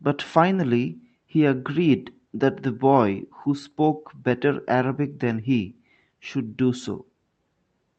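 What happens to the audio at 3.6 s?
Nothing goes wrong at 3.6 s; the speech carries on intact through that moment, with no break, click or distortion.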